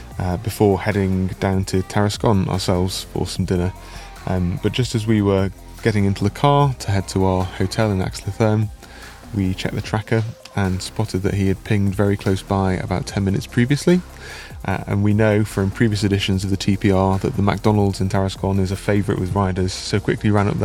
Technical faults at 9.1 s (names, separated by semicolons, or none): none